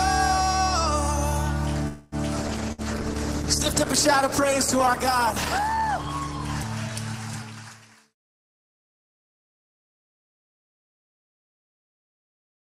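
At 1.87 s the incoming packets were likely held up in transit, leaving the jitter buffer with nothing to play, which is a call audio freeze. The last sound is stretched out as a fading buzz for about 246 ms until 2.15 s. Then the audio picks up exactly where it stopped, so nothing is lost. The whole stream simply plays about a quarter of a second later than before.

From 2.42 s to 7.75 s there is a call bitrate drop. The bandwidth estimate collapsed and the encoder was pushed from a comfortable rate down to something in the region of 12 kbps. It held at that floor for roughly 3.3 s before climbing back. Across that stretch the coding turns coarse, the top end is trimmed away, and the sound goes rough, watery and muffled. It clears again near 7.75 s.

Inside that degraded section, at 2.48 s, comes a skip ahead. A short stretch of audio that had already queued up behind the delay was discarded, likely as the buffer shed its excess. 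Playback jumps forward by something like 70 ms. The two sides are joined almost seamlessly, with only a few milliseconds of fill at 2.51 s, so the sound lurches forward rather than pausing.

At 2.72 s a burst of packet loss follows. About 60 ms of audio never arrived in time to be played. The receiver covered the hole by extending the last sound for about 57 ms and fading it as the gap went on. The result is a brief held buzz or hiss that gives way at 2.81 s to audio resuming further along, with the lost portion gone.

From 8.05 s to 11.30 s there is a jitter buffer speed-up. The buffer was holding more audio than its target, so the receiver repeatedly snipped out tiny pitch-period-length slices to draw the delay back down. In total something like a fifth of a second was removed. Playback runs about 7% fast over those three seconds, and the pitch is unchanged. It sounds slightly hurried and the timing feels pushed.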